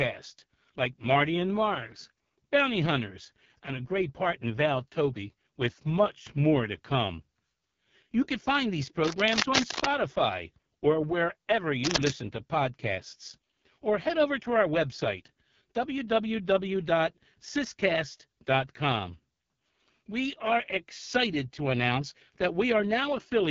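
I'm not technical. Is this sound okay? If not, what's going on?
No. The whole clip went through the AMR wideband (HD Voice) codec at a very low setting. The speech sounds rough and raspy, and nothing above 7.1 kHz survives. There is also cable scratch noise, likely from a worn cable or connector being moved. Harsh scratching covers the speech from 9.04 to 9.90 s, after "can find these". It comes back from 11.85 to 12.10 s, between "or wherever" and "to podcasts or head". Both bursts are as loud as the speech or louder.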